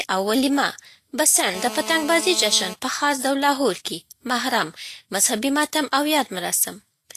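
Throughout the speech, the sound is hissy and grainy. Nothing is heard above 14.2 kHz. The likely cause is Vorbis compression at a low setting, around 36 kbps. Treble detail is quantised so coarsely that it turns into noise. Tones sound roughened.

From 1.54 to 2.74 s, a GSM phone buzz cuts in. It is a hard, raspy buzz at about 217 Hz, rich in harmonics, about 12 dB below the speech. It stays steady throughout. A nearby phone on a call is pulsing its transmitter, and the audio circuit rectifies those bursts.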